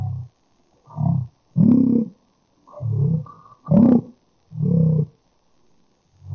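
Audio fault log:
Throughout: wrong sample rate. Everything runs at a third of its proper speed and drops about 19 semitones, so the audio comes out low, slow and dragging. Speed and pitch falling together like that fits 48 kHz material being played back at 16 kHz with no conversion.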